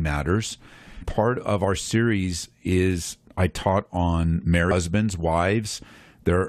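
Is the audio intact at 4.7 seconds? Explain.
No. At 4.70 s, just after "is I taught on", there is damaged data in the compressed stream: a run of bad bytes that the decoder misreads, losing frame sync until it finds the next valid header. It is heard as a very brief glitch. On a spectrogram and waveform it shows as a short disruption that breaks the speech for about 18 milliseconds.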